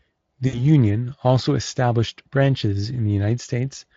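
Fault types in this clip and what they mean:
VoIP packet loss concealed by the speech codec: 60 ms of packets went missing, which fits three 20 ms frames, so the decoder extrapolated the last pitch and filter at falling gain; around 0.47 to 0.63 s speech smears into a fading buzzy tone or coloured noise and recovers slowly.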